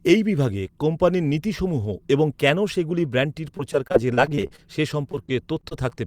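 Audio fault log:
3.57–4.60 s and 5.12–5.99 s, repeated packet loss (robotic sound): 19 brief holes, up to 32 ms, are patched by repeating prior sound, giving choppy speech with pieces missing; the spectrogram shows smeared, stuttering harmonic blocks.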